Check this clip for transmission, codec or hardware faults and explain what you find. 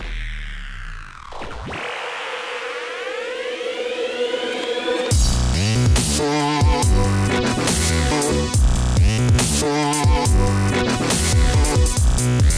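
Nothing in the recording points to a transmission, codec or hardware problem. No dropouts, glitches or other disturbances turn up anywhere in the audio.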